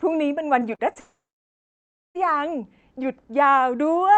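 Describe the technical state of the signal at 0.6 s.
Right around 0.6 s there's a short concealed packet loss, running from 0.59 to 0.63 s. About 20 ms of audio arrived too late to decode, so the receiver stretched the preceding sound to cover the hole and blended back in. You hear it as a brief smear or wobble in the speech.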